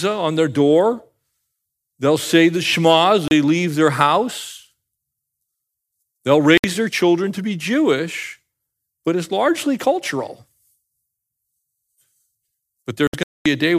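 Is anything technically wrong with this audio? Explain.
Yes, there's a digital broadcast dropout: the receiver lost good frames and muted, so the speech cuts out at 3.28–3.31 s, 6.58–6.64 s, and in broken holes around 13.07–13.46 s.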